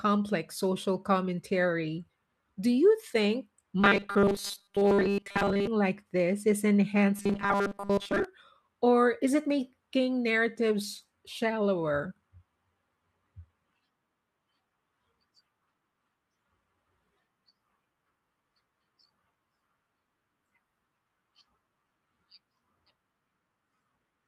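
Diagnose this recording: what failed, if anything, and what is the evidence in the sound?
Robotic sound from repeated short buffers at 3.80 to 5.67 s, after "you think", and at 7.16 to 8.25 s, before "or is it making". A rigid 200 Hz buzz fits a 5 ms block replayed over most of the audio, likely from a starved driver or buffer stage.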